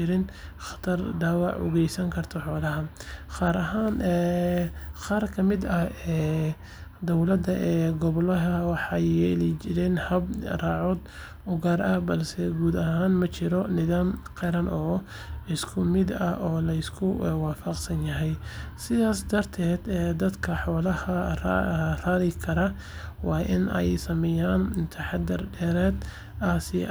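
Nothing technically wrong turns up in this speech recording; there's simply no fault to point to anywhere in it.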